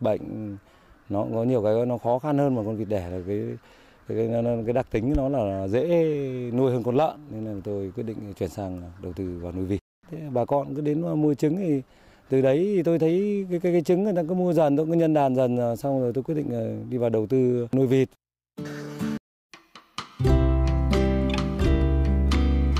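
Nothing here needs flagging: the audio runs along without any dropouts, glitches or other technical trouble to point at.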